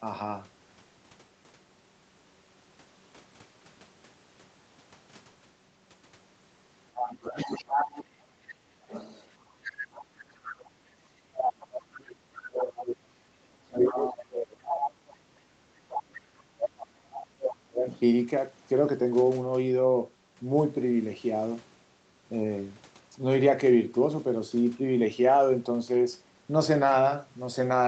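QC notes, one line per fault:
6.95–10.65 s, 11.97–12.82 s, 13.84–14.88 s, 17.13–18.0 s: other side's voice leaking through. A second voice sits under the main one, likely far-end audio from the loudspeaker that the echo canceller left in the microphone signal. It is about 10 dB below the main speech in the first stretch, about 15 dB below at 11.97 s and 17.13 s, and only about 5 dB below at 13.84 s. On a spectrogram it shows as a fainter, independent harmonic pattern overlapping the main one. It is often thinner than the main speech.
10.21–10.31 s: background gated by the echo canceller. Within this window the room tone dips by about 8 dB for roughly 50 ms, then recovers. This happens because the canceller clamped the microphone gain while the loudspeaker was active and released it a moment later. The waveform shows a brief notch in the noise floor. The spectrogram shows a short vertical gap in the background energy across the band, up to the 8 kHz ceiling.
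11.24–17.86 s: speech suppressed in double talk. For about 7 s the main voice repeatedly sinks and breaks up, with the deepest drops around 35 dB. The likely cause is that both sides were talking at once, so the canceller could not tell its own talker from the echo and attenuated everything. The waveform envelope shows ragged holes and chopped syllables. The spectrogram shows the upper harmonics thinning and vanishing in patches.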